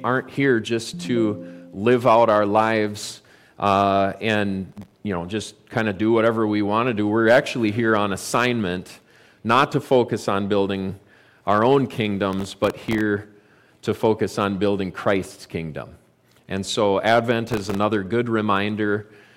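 Three bursts of processor overload crackle tear through the audio, at 4.72 to 4.97 s, 12.33 to 13.01 s and 17.47 to 17.77 s. The machine couldn't keep up with its tiny audio buffers, about 0.7 ms each. It missed roughly 15 to 30 deadlines in a row, and each miss replayed a scrap of old audio with hard edges. Stacked together, those scraps give the gritty, crackly texture, which clears once the load drops.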